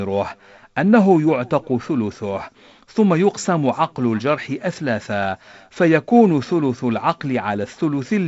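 Nothing in this speech recording stands out as a technical fault. It carries the mark of G.722 wideband telephone coding, with nothing above about 7.7 kHz and a slight coding noise that fits the 48 kbit/s mode.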